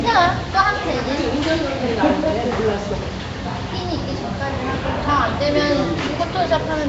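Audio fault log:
Throughout, Nellymoser compression: the sound has a rough, hissy halo and a smeared, underwater blur, with nothing above 7.7 kHz. The likely cause is Nellymoser Asao coding, where short blocks get so few bits that weak bands are replaced with noise. The damage fits a 32 kbps stream.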